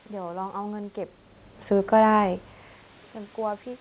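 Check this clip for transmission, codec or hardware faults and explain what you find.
No transmission, codec or hardware faults.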